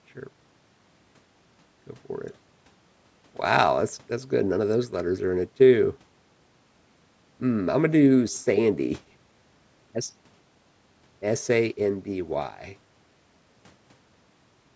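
Speech with no technical faults to report. It has passed through call microphone processing, which trims away the lowest bass and leaves nothing above 8 kHz, as expected for that path.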